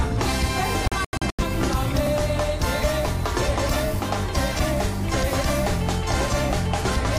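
At 0.88 s the sound cuts out in a digital broadcast dropout lasting until about 1.44 s. The receiver muted while frames failed to arrive or failed their checks, so the gap is a cluster of short silent holes, not a single one. Together they remove about 256 ms of audio spread over roughly half a second, with the longest hole about 85 ms. The pattern fits around six lost frames. Whatever was transmitted in those holes is gone.

At 2.07 s there is a brief stutter or click caused by overlapping chunks. The audio was handled in blocks 2.5 s long, and the next block began before the previous one had finished. At the join, about 13 ms of sound plays twice in quick succession. That repeated fragment breaks the continuity of the waveform, which is why it sounds like a tiny hiccup and not a gap.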